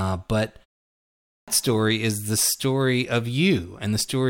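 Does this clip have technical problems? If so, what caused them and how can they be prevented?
Yes. At 1.11 s, after a silence of about 0.54 s, the speech returns with a clipped start after the pause: roughly 0.37 s of sound is lost, and the audio snaps in abruptly, running to 1.48 s, just before "story is the story". The output device had drifted into a low-power state during the gap and needed time to wake and relock, so the opening of the phrase never reached the output. On a waveform, the gap is flat and then jumps straight into the speech with no onset ramp. On a spectrogram, the energy begins as a hard vertical edge with its first sounds missing. Preventing this means keeping the output stream active through silences, for example by feeding it a low-level signal or disabling the device's idle power saving, so it never needs to wake up mid-playback.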